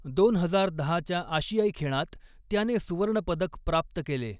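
No technical faults can be heard anywhere in the speech.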